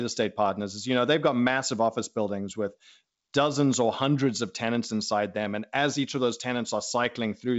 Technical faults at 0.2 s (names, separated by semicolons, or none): none